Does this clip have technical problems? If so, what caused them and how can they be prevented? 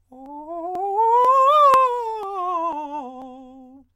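Yes. This music clip has audio missing between chunks, likely caused by a recorder or processor that handles the audio in half-second blocks and drops a few milliseconds each time it closes one block and opens the next. The remaining audio is butted together without a gap, so the music jumps slightly forward at 0.26, 0.75, 1.25, 1.74, 2.23, 2.73 and 3.22 s, giving a steady, regular stutter. Keeping the buffer serviced continuously, with double-buffering and enough processing headroom, prevents these losses.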